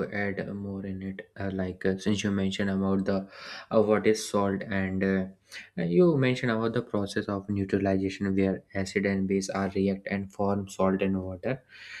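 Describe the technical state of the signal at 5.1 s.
At 5.1 s the signal is intact, with no dropout, distortion, glitch or other fault audible at that moment.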